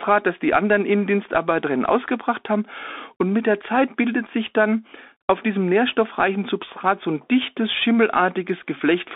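A Bluetooth CVSD headset codec runs throughout this speech clip, confining it to roughly 250 Hz to 3.6 kHz. Its one-bit adaptive steps, which fit a 64 kbps stream, leave scratchy sibilants and granular hiss.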